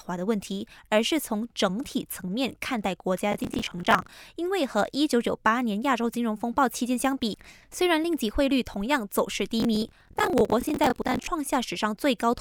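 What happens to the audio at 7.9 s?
Nothing goes wrong at 7.9 s; the speech runs on intact through that moment, with no dropout, click, glitch or other fault.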